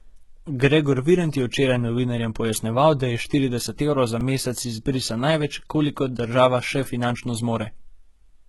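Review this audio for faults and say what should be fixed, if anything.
Low-bitrate audio saved at a high bitrate, throughout the clip: the speech has nothing above 11.8 kHz, and its dull texture points to an earlier low-bitrate encoding, likely a very low-rate AAC-type codec, that was later re-encoded as a high-bitrate MP3. The larger second encode cannot restore the detail the first one removed, so the cut-off and artefacts remain. To prevent this, re-export from the original uncompressed or high-quality source rather than from the low-bitrate copy.

Repeated buffer at 4.21 s, between "je štirideset evrov za" and "mesec izbrisa največ kolikor": a tiny piece of audio about 1.5 ms long, which fits a 64-sample buffer, plays twice more with hard joins. Because the piece is so short, it is heard as a brief click or buzz rather than a stutter, and a few milliseconds of real audio are lost. To prevent this, use a larger playback or capture buffer, or reduce the load that delays delivery of new audio.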